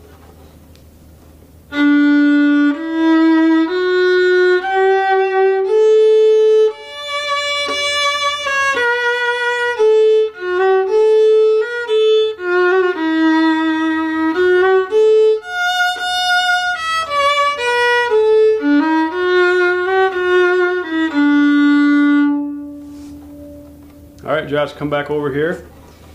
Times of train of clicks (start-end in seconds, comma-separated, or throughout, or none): none